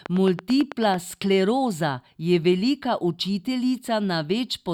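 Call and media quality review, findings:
Train of clicks, 0.06 to 0.95 s, ending just before "skleroza je velika". About ten near-identical pulses at a regular 9.1 per second, peaking roughly 10 dB above the speech. Likely cause: periodic interference coupling into the capture chain or a faulty connection or power supply injecting a pulse each cycle. Unlike random crackle or packet-loss dropouts, the clicks share one shape, keep steady spacing, and sit on top of the signal rather than removing any of it.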